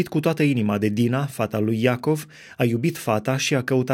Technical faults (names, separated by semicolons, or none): none